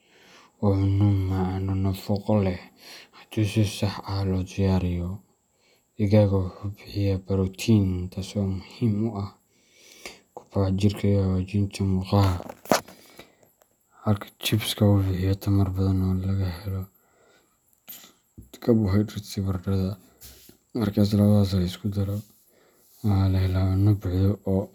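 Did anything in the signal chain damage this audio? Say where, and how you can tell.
No, nothing along the chain has left a mark on this speech recording that I can hear, so there's no damaged stage to point to here.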